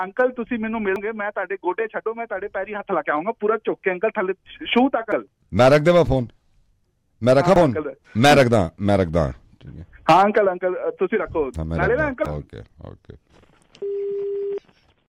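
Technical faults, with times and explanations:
0.96, 5.12, 7.56 and 11.56 s: dropped buffer (overrun). At each spot the sound jumps forward with no gap of silence. A short piece has simply gone missing and the two sides are butted together. It's most likely the software not collecting its samples before the hardware overwrote them. The skips run from a few hundredths of a second up to about a tenth, and the one at 5.12 s is the biggest jump.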